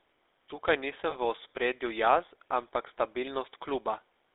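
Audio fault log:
Throughout: GSM full-rate codec. The speech passes through the original GSM coder at 13 kbps on a line limited to roughly 300 Hz to 3.7 kHz. The regular-pulse excitation gives a plainly audible buzzy, gravelly texture. A spectrogram shows nothing above 3.7 kHz and coarse, comb-like harmonic smearing.
1.10–1.16 s: lost GSM frames. One 20 ms frame is missing, so the decoder repeats the previous frame's parameters, which produces a brief rough, metallic ring. The waveform shows a short stretch of repeated periods, and the spectrogram shows a frozen, smeared slice.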